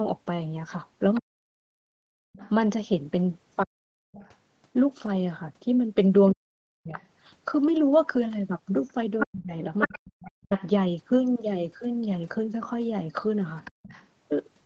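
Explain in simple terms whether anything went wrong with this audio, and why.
From 1.14 s to 14.07 s, a second, fainter voice can be heard behind the main speech, well below it in level. This is the other side's voice leaking through. The likely cause is that the talker's loudspeaker sound reached their microphone and the echo canceller didn't fully remove it.

Between 1.19 s and 10.51 s, the main speech dips sharply or cuts out in pieces, adding up to about two seconds in all. This is speech suppressed in double talk. Most likely, when both sides spoke at once, the echo canceller couldn't separate them and turned everything down.

The room sound drops out briefly twice, from 2.23 to 2.33 s and from 13.71 to 13.83 s, each time for about a tenth of a second before returning. This is background gated by the echo canceller, which clamped the microphone down hard while the loudspeaker was playing.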